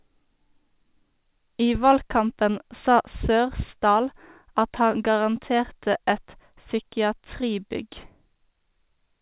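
Nothing stood out on listening to this speech, which arrives over a narrowband call line and carries nothing above 4 kHz.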